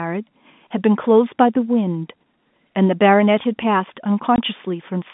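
At 4.36 to 4.38 s the speech breaks with a packet loss filled with silence. One 20 ms stretch, the length of a single packet, never arrived, and the receiver played nothing in its place. The gap has abrupt edges, unlike concealment, which would smear or repeat the preceding sound, or a level dip, which would fade. The telephone-band character of the G.711 coding, limited to roughly 150 Hz to 3.6 kHz, continues unchanged on both sides of the hole.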